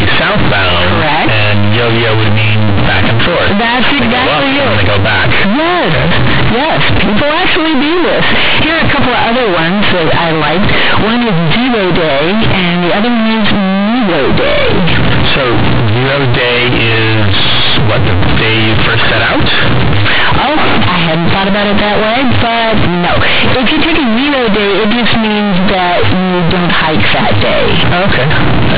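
A speech recording, and the whole thing is wrecked by companded audio read as linear: mu-law bytes are going out as plain 8-bit samples with no expansion, so every sign flip slams across half the range. You get loud, buzzy distortion throughout, quiet bits as big as loud ones, heavy noise in the pauses, all sitting on an 8 kHz telephone-band signal.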